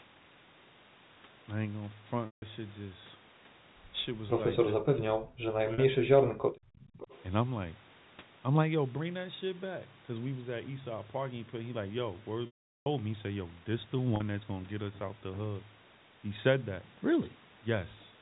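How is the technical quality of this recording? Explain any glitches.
The recording has three kinds of glitch: repeated dropouts from lost packets, a stretch where the talker is pushed down during overlapping speech, and a brief returning echo. All of it sits within a G.711 telephone band that stops at 4 kHz.

Packet loss with pitch repetition occurs at 2.26–2.42 s, 5.74–5.78 s, 12.46–12.86 s and 14.16–14.20 s. Audio went missing for 160 ms, 40 ms, 400 ms and 40 ms. The receiver covered each gap by repeating the last pitch period. The short gaps sound like a held, buzzy note. The 400 ms gap fades into silence before the sound cross-fades back.

Speech suppressed in double talk runs from 4.76 to 6.4 s and affects about 1.5 s in total. Both ends were talking at once, and the echo canceller likely turned everything down because it could not separate the talker from loudspeaker echo. The talker's level dips by as much as around 40 dB in places.

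An echo leak follows at 6.75–7.23 s, likely from a loudspeaker on one side whose echo canceller let some of its microphone pickup return. A copy of the sound arrives about 0.45 s late and roughly 20 dB below the main signal.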